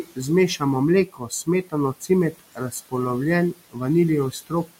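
Right from the start there are noise suppressor artifacts across the whole clip. The suppressor pulls down whatever bands it judges to be steady background by about 17 dB, working frame by frame. The room noise sits about 20 dB under the speech. The background dips away in the gaps and creeps back up under the speech.

On top of that, there are four spots of speech cut by the noise suppressor, where it mistook parts of the speech for noise and turned them down with the background. The first is at 0.03 to 0.19 s, right at the top. The next is at 1.06 to 1.74 s, the longest stretch, with maybe a third of a second actually hit. Then comes 2.32 to 2.93 s, and the last is at 4.32 to 4.71 s near the end. The drops reach about 16 to 18 dB, so those bits come across swallowed and faint.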